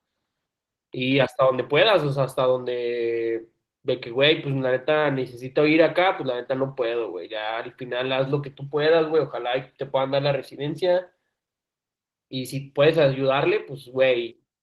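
Throughout the speech, Opus voice compression is plainly audible: the sound is hoarse and faintly robotic, consistent with hybrid coding at a bitrate around 16 kbps. A spectrogram would show smeared harmonics below 8 kHz and patchy, blocky energy above it, changing every 20 ms.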